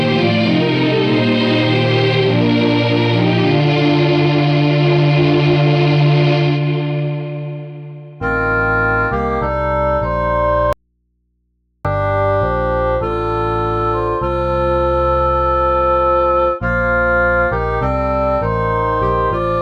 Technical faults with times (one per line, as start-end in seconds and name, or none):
10.73-11.85 audio dropout to a faint residue